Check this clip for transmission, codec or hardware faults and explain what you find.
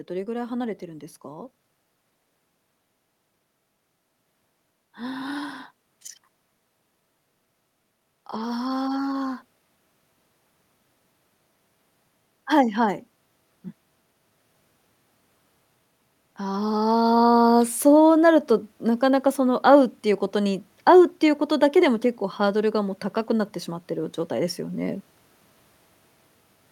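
Automatic gain rising occurs twice: 8.11–9.44 s, about 3 dB, and 16.21–25.05 s, about 7 dB. The gain control judges input too quiet, lifting speech and background together.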